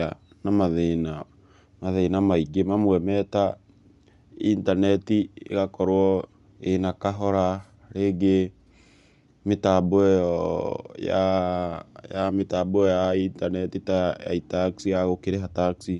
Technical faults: Bluetooth LC3 compression

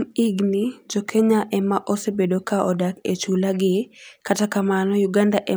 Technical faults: none

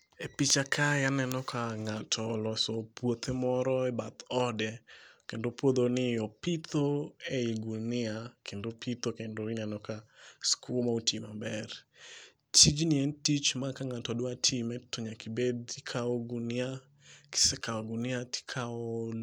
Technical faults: none

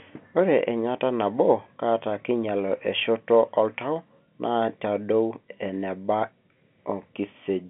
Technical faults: none

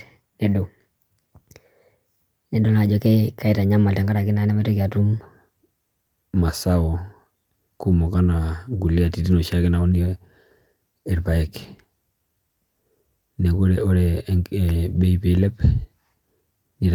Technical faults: section at the wrong speed

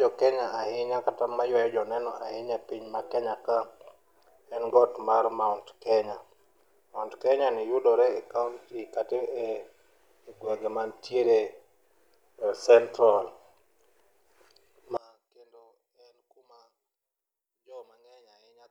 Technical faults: one channel inverted

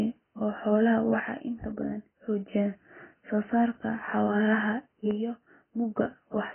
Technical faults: AAC compression; one channel drops out

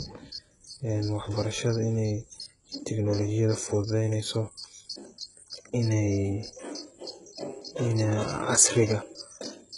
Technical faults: HE-AAC compression

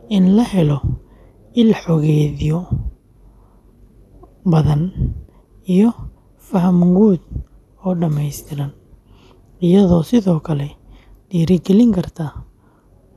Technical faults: none

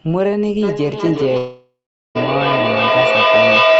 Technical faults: feedback howl; long network dropout

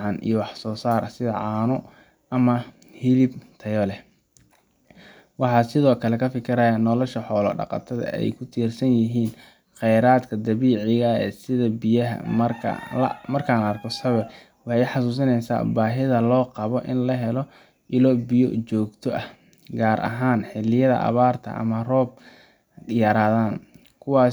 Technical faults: none

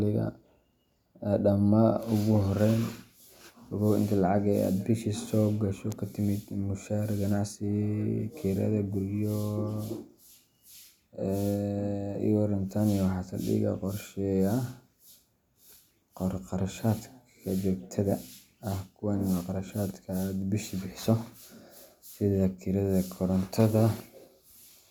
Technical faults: none

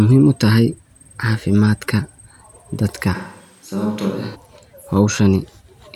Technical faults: switch to a distant microphone

